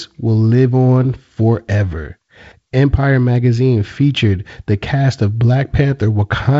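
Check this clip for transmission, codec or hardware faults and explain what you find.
The speech arrives through G.722 wideband telephone coding, with nothing above 7.7 kHz and a light coding texture consistent with its reduced 48 kbit/s mode, and nothing beyond what that coding itself leaves can be heard.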